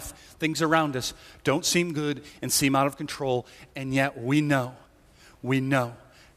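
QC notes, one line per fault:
Nothing stood out on listening to the speech in this clip.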